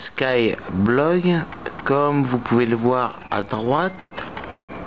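From 3.11 s to 4.14 s the audio shows repeated stalls (stutter): 19 short interruptions in which the receiver's jitter buffer ran dry and the last sound was stretched to fill the wait. The longest hold lasts 115 ms, and roughly a third of that stretch is concealment, about 0.31 s in total. Nothing is skipped, so the sound drags and catches rather than losing content, with the band-limited top end, nothing above 8 kHz, consistent with a G.722 call path.

At 4.50 s a call audio freeze sets in and lasts until 4.72 s. About 184 ms is filled in, the held last sound trailing off so that roughly 110 ms of that is silence, before playback resumes from the point where it stopped. The likely cause is packets held up in transit, emptying the jitter buffer and shifting playback delay by 184 ms, so a gap is inserted without any audio being dropped.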